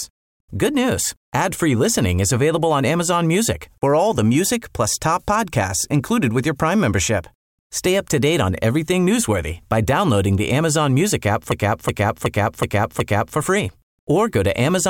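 Speech clip with a system hang loop from 11.52 to 13.38 s: a 0.37 s chunk repeats five times at about 2.7 Hz, a stutter that fits a 16384-sample buffer.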